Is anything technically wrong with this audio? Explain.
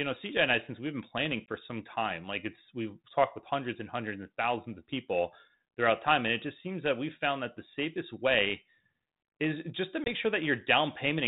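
Yes. Packet loss on an ADPCM call occurs twice in this speech, at 1.46 to 1.54 s and 10.04 to 10.11 s. Each time about 20 ms of audio, roughly a single packet, drops to hard-edged silence. Because the 32 kbit/s G.726 decoder's predictor and step size lose step with the sender's, the speech resumes briefly with some distortion before settling.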